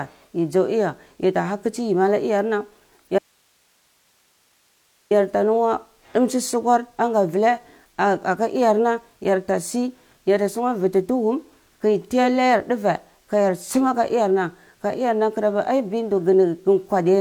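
At 3.19 s the speech cuts out abruptly, and for about 1.9 s, until 5.11 s, the gap holds only hiss, roughly 40 dB below the speech level, before the speech returns just as suddenly. This is an audio dropout to a faint residue: the wanted signal was likely lost upstream while the path after the break stayed live, so the noise floor carried on through the gap. The hard edges distinguish it from a natural pause or fade.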